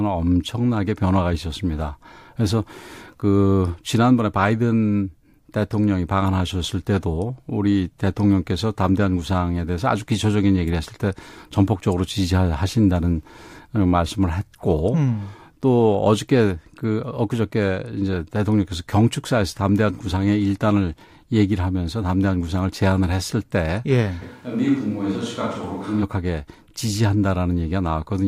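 At 24.23 s the speech suddenly goes roomy and hollow, loses its low end, and drops around 5 dB, with room noise rising to roughly 35 dB under the speech. At 26.01 s it snaps back. That's likely a switch to a distant microphone.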